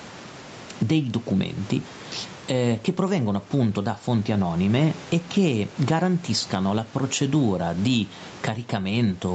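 Gain pumping runs through the speech: the gain swings by around 15 dB, pulled down under loud syllables, likely from excessive microphone gain driving a fast limiter.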